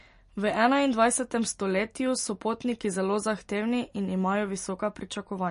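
Throughout, the speech sounds watery and swirly, with nothing above about 10.6 kHz, likely from MP3 compression at a low bitrate, around 40 kbps.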